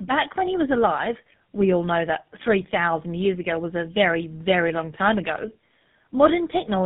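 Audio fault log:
throughout, tandem speech coding: the speech has been squeezed through two low-rate speech coders in succession, the last sounding like GSM full rate, each re-coding the already degraded output of the one before, so roughness, muffling and warbly artefacts stack up beyond what either alone would leave. On a spectrogram energy stops sharply at about 3.8 kHz, with smeared, blotchy formant bands and broken harmonics; the waveform looks coarse, with uneven envelopes.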